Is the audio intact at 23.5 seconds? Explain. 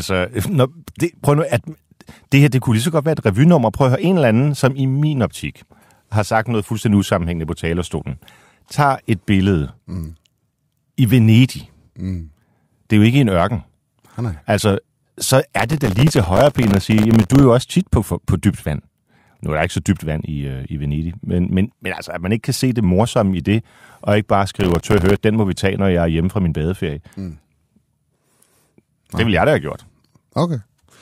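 Yes, the speech at 23.5 seconds plays through intact, with no dropout, click or other fault at that point.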